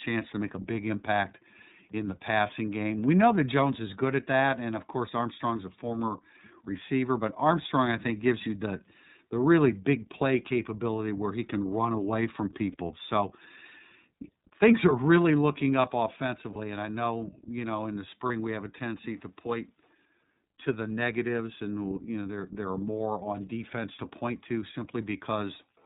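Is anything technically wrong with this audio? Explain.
Yes. The iLBC codec runs throughout: each 30 ms frame is coded independently in a narrowband channel, so nothing above 4 kHz survives and the speech sounds plainly rough and synthetic, consistent with the 13.33 kbps mode.

There are lost iLBC frames at 12.72 to 12.75 s (after "can run away from"), 16.53 to 16.57 s (before "and I know you"), and 18.27 to 18.31 s (between "you know in the" and "we have a tendency"). In each, the decoder fills a roughly 30 ms gap, matching one missing frame, by repeating the last pitch cycle with noise. This produces a brief buzzy, held vowel, and the speech recovers immediately afterward.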